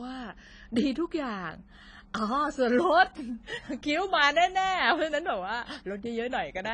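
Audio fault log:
Throughout: AAC compression. The speech was likely passed through an AAC-LC encoder at a low rate, consistent with about 24 kbps. This removes everything above 10.4 kHz and coarsely quantises what remains, leaving the voice dull and smeared, with plainly audible warbling and fizzy sibilants.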